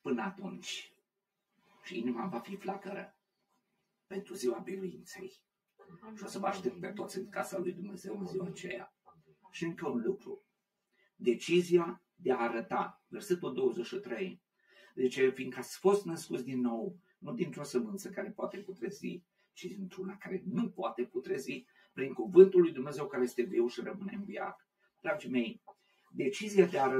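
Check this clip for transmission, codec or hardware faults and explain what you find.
Three faults run through the clip: comb filtering from a delayed channel, a speech noise suppressor acting on non-speech sound, and repeated dips where that suppressor cuts the sound.

Channel delay (comb filtering), throughout: one channel lags by roughly 5 ms before mono summing, cancelling evenly spaced frequencies from around 100 Hz upward, giving a hollow, phasey tone.

Noise suppressor applied to music or sounds, throughout: a speech-tuned suppressor treats steady content as noise, so the level pumps by a few dB while attacks pass and sustained parts thin.

Sound cut by the noise suppressor, at 0.9 to 1.79 s, 3.12 to 4.11 s, 8.9 to 13.12 s, 14.38 to 14.76 s, 17.01 to 17.23 s, 19.21 to 19.57 s, 21.63 to 21.97 s and 24.57 to 26.14 s: the suppressor misjudges sustained or decaying sound as noise and pulls it down by about 12 to 18 dB, so tails sink abruptly.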